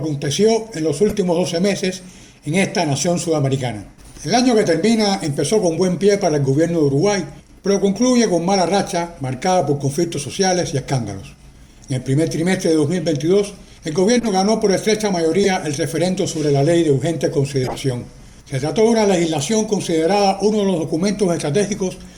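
Four short bursts of corrupt frame decoded damage occur, at 1.09 to 1.12 s, 14.20 to 14.30 s, 15.44 to 15.46 s and 17.63 to 17.76 s. Each is a brief chirp or noise blip. Flipped bits in a handful of compressed frames made the decoder apply wrong gains or misread spectral codes, so energy landed at the wrong frequencies for the span of those frames. The error is strongest at 15.44 s.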